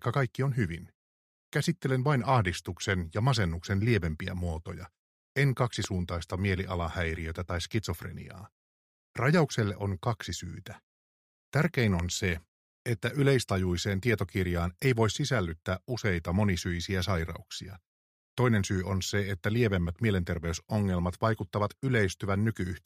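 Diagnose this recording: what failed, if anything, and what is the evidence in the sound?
Two sharp, single pops sit on top of the sound at 5.84 to 5.86 s and 11.99 to 12.02 s, the first clearly louder, with the audio continuing underneath. This loud pop pattern likely comes from analogue wiring: a brief voltage pulse from a plug, switch or static discharge.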